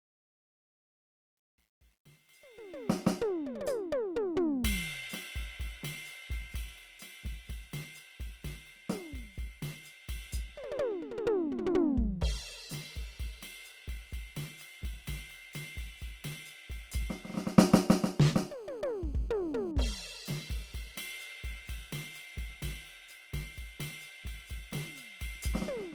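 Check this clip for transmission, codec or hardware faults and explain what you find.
Four faults can be heard in the music: compression damage across the whole clip, gritty truncation distortion in the opening fade, and two kinds of GSM phone interference just after 18 s.

Opus compression, throughout the clip. The damage is plainly audible. Tones come out rough, grainy and noisy rather than clean, but the spectrum stays full up to about 20.2 kHz with no obvious holes or swirling. That pattern likely comes from Opus in its music (CELT) mode at a low rate, consistent with around 24 kbps. At that rate the encoder keeps each band's energy but runs short of bits, so it fills band detail with folded or noise-like content.

Truncation distortion on a fade, 0.00 to 3.07 s, worst from 0.00 to 2.6 s. The fade-in rises smoothly in level to 3.07 s, yet its quiet early part sounds gritty. The fade was processed at too coarse a resolution, which fits a stage keeping about 11 bits, and no dither was added. 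Near the bottom of the fade the waveform collapses into a few square steps, and those steps produce the harsh texture.

GSM phone buzz, 18.16 to 19.72 s. A hard, raspy buzz at about 217 Hz, rich in harmonics, sits about 31 dB below the music and bears no relation to it. A 2G phone nearby was in a call, transmitting radio bursts 217 times a second. The audio circuitry rectified those pulses into sound, which makes the buzz steady for as long as it lasts.

GSM signalling bursts, 19.77 to 20.50 s. Straight after the buzz, the interference turns into even ticks with a longer 217 Hz buzz twice a second, roughly 30 dB below the music. This is the same phone in its call while its user is silent. It then sends only short groups of bursts instead of a continuous train, and the circuitry rectifies each group into a separate tick.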